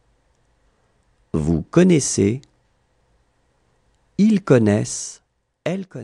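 Nothing here sounds wrong: there's no glitch, dropout or distortion anywhere in the clip, so there's nothing to point to.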